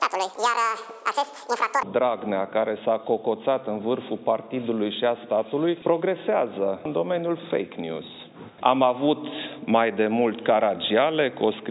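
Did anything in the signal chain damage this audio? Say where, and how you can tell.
Yes. From the start to about 1.83 s the sound has a wrong sample rate fault at the playback stage. It runs at twice normal speed and a full octave high (12 semitones). Recorded samples were clocked out at double the intended rate without resampling, which fits 8 kHz material played as 16 kHz. On a spectrogram, harmonic spacing doubles and events compress in time, and energy reaches a ceiling near 8 kHz rather than 4 kHz. The waveform looks squeezed horizontally.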